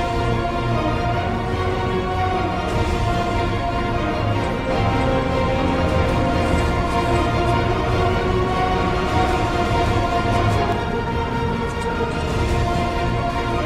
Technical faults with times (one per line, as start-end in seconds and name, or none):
4.70-10.72 doubled audio track